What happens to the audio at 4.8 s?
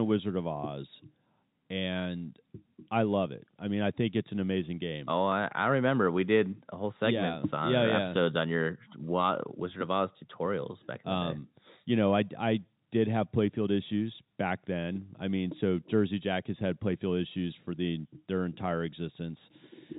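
Nothing goes wrong at 4.8 s: the speech there carries on intact, with only the band-limited telephone sound of G.711 coding, where nothing above about 3.8 kHz comes through.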